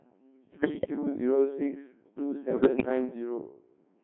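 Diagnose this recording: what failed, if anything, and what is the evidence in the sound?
The codec stage is where this went wrong. The whole clip has gone through a Codec 2 vocoder, and the damage is heavy. The speech is buzzy and robotic from start to finish, and it sits in a narrow band from about 150 Hz to 3.4 kHz. The sound points to the 1.6 kbit/s mode. The decoder doesn't keep the original waveform. It rebuilds the speech from sine waves using only pitch, voicing, energy and a rough spectral envelope, so all natural texture is lost.

On top of that there are bit errors on digital voice radio, which puts this at the network or radio-link stage. From 0.57 to 0.90 s and again from 2.53 to 2.89 s, the speech breaks into warbles and bleeps, with sudden jumps in pitch, level and tone colour. At a rate this low, every bit controls a whole frame's parameters. An error rate of roughly 7 percent is enough to scramble each burst, which sounds like around eight or nine frames hit.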